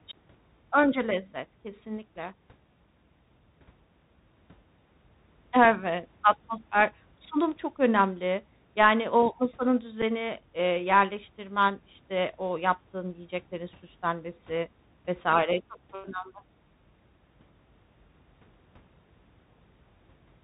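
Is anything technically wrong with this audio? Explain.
Yes. The whole recording passes through the Bluetooth CVSD headset codec, which fits a 64 kbps link. Nothing above 4 kHz survives. Sibilants sound scratchy over a granular hiss.

At 10.02 s, between "o masanın" and "eee yerleştirmen işte o", there is unconcealed Bluetooth headset packet loss. About 7.5 ms vanishes, probably a couple of packets. It leaves a brief gap with abrupt edges.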